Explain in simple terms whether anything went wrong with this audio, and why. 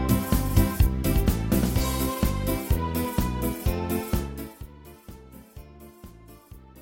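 Nothing went wrong with this audio: the signal comes through intact, with no dropouts, glitches or distortion to be heard.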